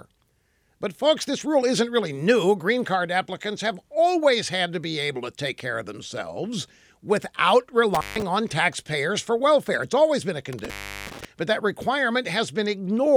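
A speech recording with two dropouts from intermittent contact, typical of a loose cable or plug momentarily opening the signal path. The first runs from 7.95 to 8.22 s, between "care of themselves without" and "on taxpayers for welfare", with the line open for about 0.15 s. The second runs from 10.53 to 11.25 s, between "always been a" and "but that", with the line open for about 0.37 s. Each cut has crackle at its edges as the contact breaks and remakes.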